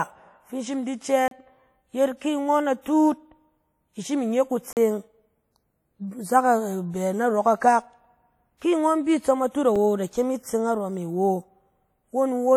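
WMA compression runs through this whole speech clip, likely the cause of the plainly audible ringing, washy smearing and breathing hiss, as quantisation noise spreads over long transform blocks and weak detail is zeroed, which fits a bitrate around 48 kbps. Blocks of digital silence cut in at 1.28 to 1.31 s, just after "in shim in di", at 4.73 to 4.77 s, after "i shim inye", and at 9.76 s, where the sound cuts out abruptly for about 32, 39 and 3 ms, leaving short holes or a tick.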